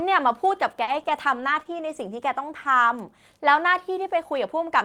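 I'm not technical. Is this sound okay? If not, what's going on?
No. Between 0.83 and 2.09 s there are scattered short gaps: about three tiny dropouts, the longest around 40 ms, patched by stretching the preceding sound, leaving brief ticks or hiccups.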